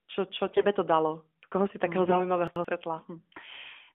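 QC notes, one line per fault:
0.46–0.65 s and 2.06–2.30 s, AMR bit errors: two bursts where the sound keeps its pitch and level but turns hoarse, scratchy and gargly. Flipped low-priority bits misplace the excitation pulses and skew fine gain and spectral values, with about a tenth of bits damaged, spanning roughly nine and six frames.
2.48–2.65 s, chunks out of order: an 85 ms block plays one slot late, swapping places with its neighbour. No audio is lost, but the order is jumbled, and there are three hard joins at the block edges in the AMR-NB narrowband 12.2 kbps audio.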